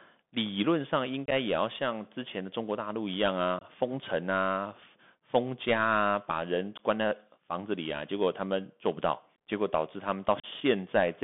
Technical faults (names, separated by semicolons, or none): Bluetooth CVSD headset codec; unconcealed Bluetooth headset packet loss